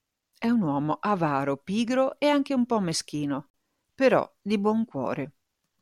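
At 3.50 s, after "anche un po' meschino", speech breaks into a 40 ms silence before "però di". This gap at a join of encoded pieces comes from untrimmed encoder padding.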